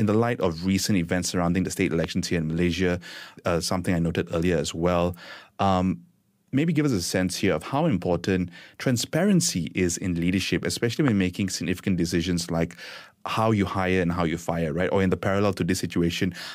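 Speech recording with two loud pops, each a single sharp transient lasting about 20 ms, at 2.04 to 2.06 s and again at 11.08 to 11.10 s. Both peak roughly 15 dB above the surrounding level, and the speech continues underneath without interruption. Such brief isolated spikes are likely voltage steps or pulses entering the signal path, for example from a connector, a switch, static discharge, or a driver glitch, and then shaped by the downstream circuitry.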